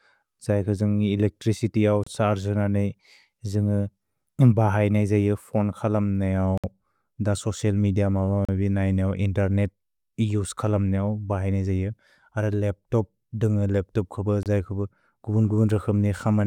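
At 2.04, 6.58, 8.45 and 14.43 s the speech drops out for 28 to 61 ms, flat gaps in the waveform, a likely Bluetooth stall from a starved buffer.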